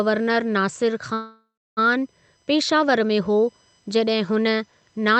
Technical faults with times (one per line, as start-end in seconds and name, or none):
0.00-5.19 USB whine
1.13-1.79 call audio freeze